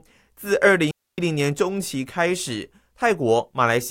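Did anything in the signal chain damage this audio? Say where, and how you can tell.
Yes. The damage sits in the wireless link, and it is a digital wireless dropout. From 0.91 to 1.18 s the speech stops dead for about 0.27 s. The gap is a clean hole of near silence. There is no crackle, hiss or burst of noise on either side. The edges fade very quickly. That points to the receiver losing too much data and muting itself, rather than an analogue fault or a damaged file.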